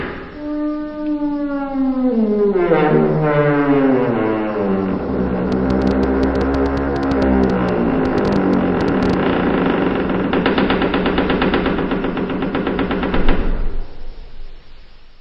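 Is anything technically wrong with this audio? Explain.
Yes. A train of clicks runs from 5.52 to 9.14 s. For about three and a half seconds a string of short pulses lands on the sound at roughly 8.6 per second, about thirty in all, with irregular spacing between them. Each click has much the same sharp shape and peaks around 10 dB above the underlying signal, so it reads as uneven ticking or popping on top of the audio. The likely cause is electrical interference from nearby equipment or a faulty connection or power supply injecting pulses into the signal path.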